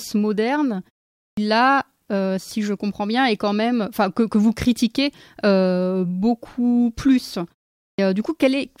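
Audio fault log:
1.2 s and 7.8 s: clipped start after a pause. After pauses of about 0.38 s and 0.34 s, the output device was slow to wake, so the first 0.17 s and 0.18 s of sound were swallowed. At 1.2 s, "là si je comprends" begins abruptly. At 7.8 s, the speech following "vous critiquez beaucoup plus" does the same. On the waveform, each onset is a hard step out of flat silence. On the spectrogram, energy appears as a sudden vertical edge, with no gradual onset.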